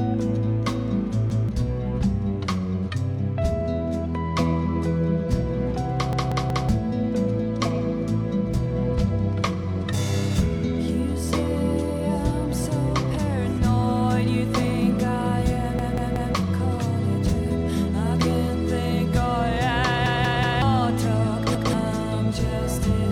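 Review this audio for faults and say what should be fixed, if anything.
A repeated buffer stutters the sound at 1.3, 6.13, 15.79, 20.06 and 21.55 s. Fresh audio arrived late, so the device replayed its last block of about 186 ms, which fits an 8192-sample buffer. That block plays twice at 1.3 and 21.55 s, and four times at the other three points, where roughly half a second of material is lost. A waveform shows identical blocks side by side with hard edges, and a spectrogram shows repeated patterns split by vertical lines. Raise the playback thread's priority or add buffering so blocks arrive on time.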